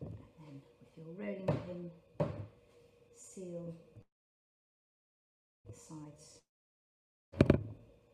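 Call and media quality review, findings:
Call audio freeze, 4.01 to 5.67 s. Sound stops, a short fading buzz, then about 1.56 s of silence. Resumes where it left off, nothing lost, 1.64 s later than before. Likely jitter buffer underrun from delayed packets.

Long network dropout, 6.39 to 7.36 s. Brief fading tail, then about 0.88 s of silence. Sound returns further on, roughly 0.94 s skipped. Likely packet loss on the network path, with concealment filling the hole.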